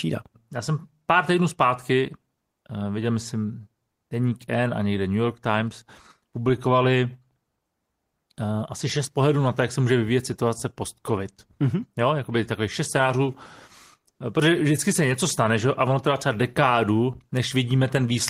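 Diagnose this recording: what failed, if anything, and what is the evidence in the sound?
Nothing in the recording points to a failure at any stage of the chain. The speech comes through with no audible fault from capture to playback.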